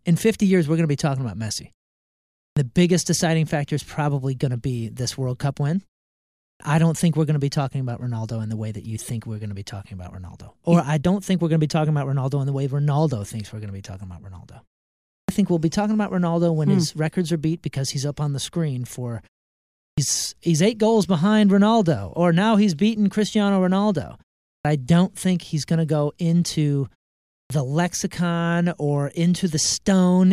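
Clipped start after a pause at 2.48, 6.51, 15.2, 19.88, 24.56 and 27.42 s: the output wakes late after silent gaps, losing the first 82–96 ms of speech abruptly.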